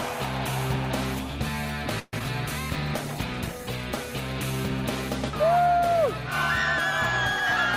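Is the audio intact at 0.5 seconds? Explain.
Yes, the audio at 0.5 seconds is intact, with no dropout, click, distortion or other fault at that moment.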